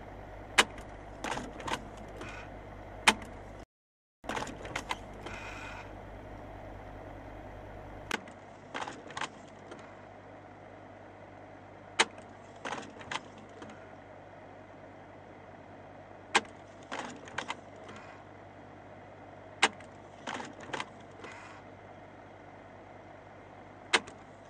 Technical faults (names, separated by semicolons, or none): rebuffering stall; input switched to a poorer device